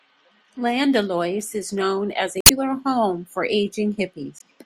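Damaged data in a compressed stream appears at 2.39 to 2.51 s and again at 4.37 to 4.42 s in this speech. Each time, part of the coded stream is wrong, so the decoder misreads or rejects the affected frames, loses sync and hunts for the next valid frame header. The result is a brief chirp, squawk, click or short hole replacing the speech, lasting about 120 ms the first time and about 40 ms the second.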